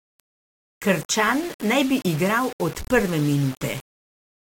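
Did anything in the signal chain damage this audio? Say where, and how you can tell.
Yes. Low bit depth without dither runs through the whole clip. The speech carries a grainy, rough distortion that rises and falls with the signal, and the quietest passages sputter or collapse toward silence instead of fading smoothly. The stage is likely a sample-format conversion that rounded the audio to about 5 bits with no dither, leaving error around 20 dB below the speech. Because nothing decorrelates that rounding error, it tracks the waveform as distortion rather than steady hiss.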